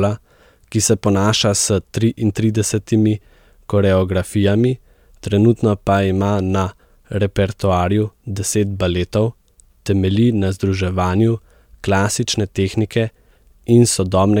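Nothing in the signal points to a technical fault at any moment.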